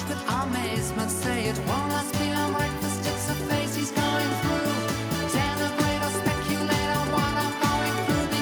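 No technical faults can be heard anywhere in this audio. Nothing in the sound calls for a time stamp or an explanation.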